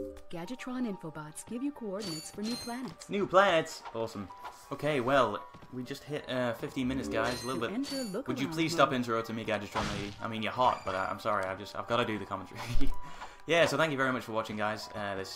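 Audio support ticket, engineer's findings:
Findings: no fault heard in this clip.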